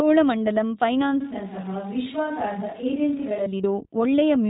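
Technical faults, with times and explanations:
Throughout, iLBC codec: clearly rough, slightly synthetic speech with nothing above 4 kHz, from a narrowband codec coding each frame independently, consistent with 15.2 kbps.
1.21–3.46 s, switch to a distant microphone: speech abruptly turns roomy and hollow, about 5 dB quieter with more background noise, likely from a farther microphone replacing the close one.
3.62 s, lost iLBC frames: a brief buzzy held sound lasting 20 ms, where one lost frame was filled by repeating the last pitch cycle with noise.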